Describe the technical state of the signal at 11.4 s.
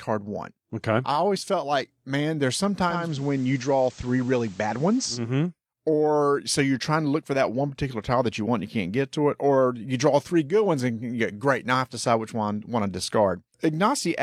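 At 11.4 s the speech signal is intact, with no dropout, distortion or other technical fault.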